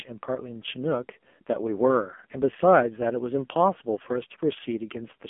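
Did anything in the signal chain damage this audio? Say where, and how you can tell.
Yes, at the codec: buzzy, synthetic speech throughout, nothing above 3.5 kHz. This is heavy AMR narrowband mobile codec damage, which fits a very low bitrate near 5.9 kbps.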